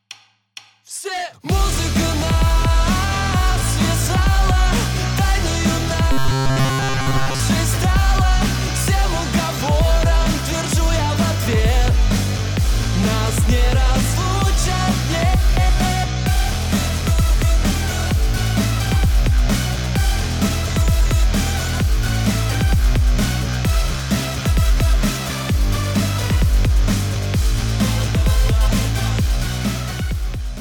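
From 6.12 to 7.40 s, the sound turns into a rigid metallic buzz at 133 Hz. This is robotic sound from repeated short buffers. The likely cause is audio arriving too seldom, so a 7.5 ms slice repeats and replaces most of the real audio.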